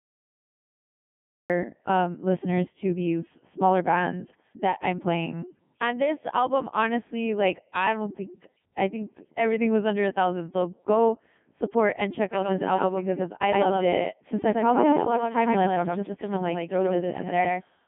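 The file holds digital silence until 1.50 s, where a cut-off start drops straight into the middle of speech with no attack, visible as a flat line ending in an abrupt waveform edge.

Throughout, the Codec 2 vocoder at 3.2 kbit/s rebuilds the voice from sine waves, sounding heavily robotic and buzzy, with energy confined to about 150 Hz to 3.5 kHz and nothing above 3.7 kHz.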